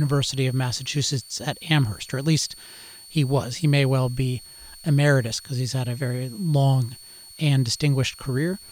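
A switching supply whistle runs under the speech from start to finish: a thin, high tone wandering between about 4.35 and 4.49 kHz. It sits roughly 25 dB below the speech, from a switching power supply running in an audible burst mode or beating with another one.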